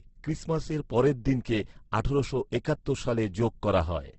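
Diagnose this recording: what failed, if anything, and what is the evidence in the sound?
Codec stage: throughout, the speech is rough and grainy, with nothing above 8.2 kHz. This is likely heavy Opus compression; its noise-filled bands lack MP3's swirling holes.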